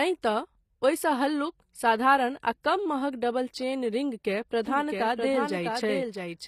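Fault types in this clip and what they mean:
HE-AAC compression: the speech's treble, up to about 14.9 kHz, sounds copied up from lower bands, with gritty, lispy s sounds, likely from a low-bitrate encode near 24 kbps.
Doubled audio track: from 4.67 s to the end, a second copy about 5 dB down trails by roughly 0.7 s, dry and abrupt, likely a duplicated path.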